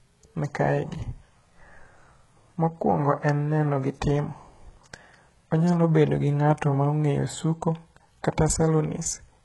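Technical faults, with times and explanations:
Throughout, HE-AAC compression. The speech carries heavy codec damage, and nothing sounds above 11.5 kHz. The treble seems copied up from lower bands, likely spectral band replication at a bitrate near 12 kbps. Its harmonics misalign, so s sounds turn gritty and lispy.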